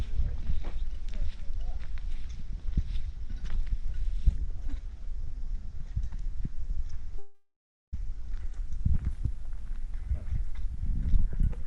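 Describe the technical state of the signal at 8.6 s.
At 8.6 s the signal is intact, with no audible fault at that moment.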